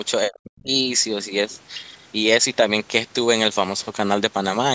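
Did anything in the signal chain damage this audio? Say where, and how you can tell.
Yes. At the call-processing stage, the speech collapses from 0.3 to 0.71 s, dropping by roughly 40 dB. The likely cause is speech suppressed in double talk: the echo canceller mistook simultaneous far-end activity for echo and attenuated the near-end talker along with it.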